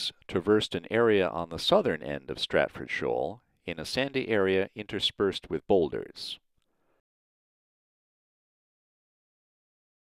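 Listening closely to the whole clip, nothing stood out as a technical fault at any point.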